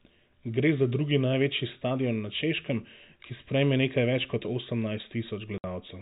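At 5.58 s the speech drops out for 60 ms, a gap consistent with three lost 20 ms packets replaced by silence, with hard edges.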